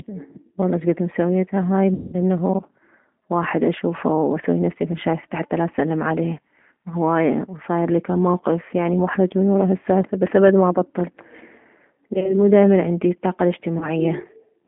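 G.729 codec damage runs through the whole speech clip. At 8 kbit/s, each 10 ms frame is rebuilt from a vocal tract filter, a pitch predictor and a few pulses, inside a 200 Hz to 3.7 kHz line. This leaves the voice plainly rough and synthetic.

VoIP packet loss concealed by the speech codec occurs three times:

At 1.94 to 2.16 s, after "والله شكد مسويتها هاي", about 190 ms of audio is missing.

At 12.14 to 12.38 s, before "مو دائما عندي طاقة", short losses are scattered over about 100 ms.

At 13.79 to 13.89 s, after "مو دائما عندي طاقة", there is a brief loss.

Each time, the decoder stretches its last pitch and filter with falling gain, so the gaps turn into a fading buzz or coloured noise.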